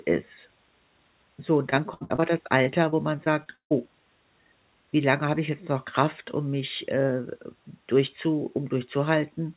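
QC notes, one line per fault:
1.70–2.24 s and 2.64–3.73 s, repeated packet loss (robotic sound): choppy stretches with pieces missing, five gaps in each run, the longest 67 ms and then 150 ms. Lost packets were patched by stretching the preceding sound, so about a third and a fifth of each span is synthetic fill, heard within band-limited call audio with nothing above 4 kHz.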